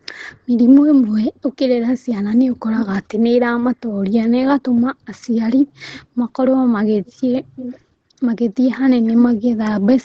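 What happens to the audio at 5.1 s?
Nothing goes wrong at 5.1 s; the speech continues intact there, carried through the call's microphone processing and Opus codec with the content above 8 kHz removed, as it is in normal call audio.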